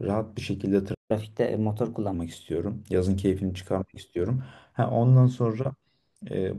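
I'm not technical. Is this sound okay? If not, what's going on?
No. At 0.94 s there was a playback stall, likely the player running short of data, so the speech cuts out for about 0.15 s before resuming at 1.11 s. From 1.11 to 2.14 s comes catch-up at higher speed: the player races through its backlog at 1.15 times normal speed, so the speech sounds hurried and about two semitones higher before settling back.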